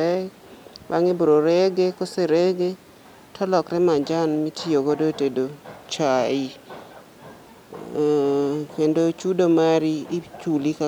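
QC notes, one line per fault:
No technical faults were detected anywhere in the signal.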